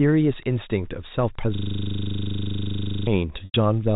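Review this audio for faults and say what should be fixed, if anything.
Wi-Fi interference runs through the whole recording as a faint ticking about ten times a second, well below the speech. A nearby Wi-Fi radio's beacon, repeating every 102.4 ms, is being rectified by the audio circuit and added to the signal. Keep Wi-Fi radios away from the microphone and preamp, and use shielded, well-grounded cabling.

A system hang loop runs from 1.55 to 3.07 s. The computer or driver stalled while the sound hardware kept replaying its ring buffer, so one 40 ms slice repeats exactly, dozens of times, as a buzz at 25 Hz. Eliminate the driver or scheduling stall, and have the audio device mute its output when the buffer stops being refilled.

Packet loss with pitch repetition occurs from 3.45 to 3.54 s. About 90 ms of audio went missing, a gap that points to a few consecutive packets. The receiver bridged it by repeating the last pitch period, which fades out before the speech returns through a short cross-fade. 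The audio also passed through G.711 A-law telephone coding, which passes nothing above 4 kHz. Reduce network loss, or add a jitter buffer and forward error correction on the link.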